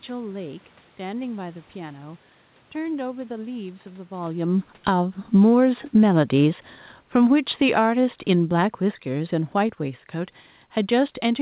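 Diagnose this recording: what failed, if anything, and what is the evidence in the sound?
Automatic gain falling, in the call processing stage: from 4.71 s to 10.1 s the speech and the room background sink together by about 12 dB. On the waveform the envelope tapers steadily. On the spectrogram the whole band, noise floor included, darkens evenly. The gain control judged the input too loud shortly after the talker shifts position near 4.0 s, and it eased its gain down gradually.

Automatic gain rising, also in the call processing: between 7.3 s and 8.19 s the level climbs about 4 dB, with speech and background swelling together. The waveform envelope bulges briefly within the longer decline, and the spectrogram brightens uniformly, including the gaps between phrases. The control momentarily judged the input too quiet and pushed its gain back up.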